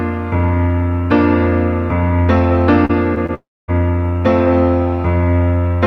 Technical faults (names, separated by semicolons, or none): short concealed packet loss; long network dropout